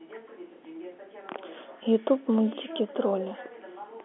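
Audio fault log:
No faults found; the speech sits in the narrow 250 Hz to 3.4 kHz band of G.711 telephone coding, which fits a 64 kbps A-law line.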